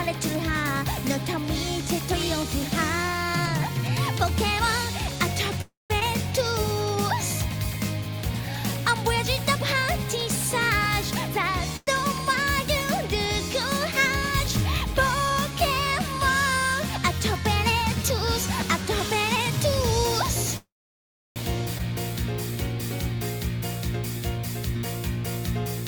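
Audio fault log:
5.61–5.92 s, 11.76–11.89 s and 20.57–21.38 s, call audio freeze: Playback stalls for 0.30, 0.13 and 0.81 s. The last sound is stretched into a fading buzz, then near-silence, up to 0.69 s in the longest. Delayed packets likely drained the jitter buffer. Nothing is lost.
6.00–6.03 s and 21.78–21.81 s, skip ahead: Playback lurches forward with almost no gap. Roughly a fifth of a second, then about half a second, is dropped. The jump sheds delay built up by the preceding freezes.
19.34–19.58 s, jitter buffer speed-up: The sound runs about 136% fast at unchanged pitch and feels hurried. Short pitch-period slices, roughly 100 ms in total, were cut to drain an overfull buffer.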